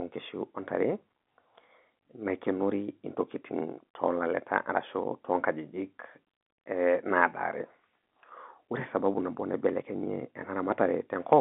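There are no technical faults to describe in time order; the speech arrives over G.711 telephone coding, so the sound stays within the narrow line band with nothing above about 3.8 kHz.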